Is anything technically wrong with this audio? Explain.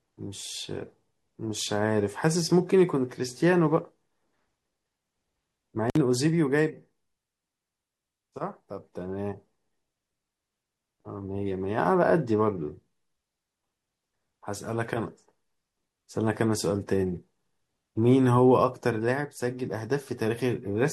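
Yes. The speech has an intermittent contact fault from 5.88 to 5.97 s: a loose cable or plug connection briefly breaks, so the signal drops out for about 56 ms, with crackle where the contact opens and closes and only faint hiss in between. On a waveform this shows as a short, near-flat gap bounded by sharp spikes. On a spectrogram it appears as vertical broadband streaks at each edge around a brief, nearly empty band.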